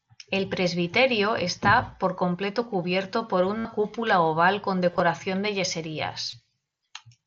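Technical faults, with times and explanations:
3.58 to 3.65 s, concealed Bluetooth headset packet loss: right after "por completo cubierto por", about 68 ms of audio goes missing and the receiver patches it by looping the last bit of waveform. You hear a short buzzy hold, then a slight warble as "cúpula oval con" comes back in.
4.91 to 5.00 s, concealed Bluetooth headset packet loss: just after "cúpula oval con", several brief dropouts scattered over 90 ms, none longer than about 23 ms.
6.30 to 6.33 s, concealed Bluetooth headset packet loss: a single 23 ms gap, filled by continuing the last stretch of waveform.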